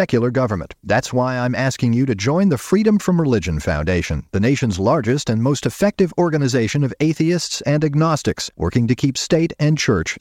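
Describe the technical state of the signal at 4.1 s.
At 4.1 s the speech signal is intact, with no audible technical fault at that moment.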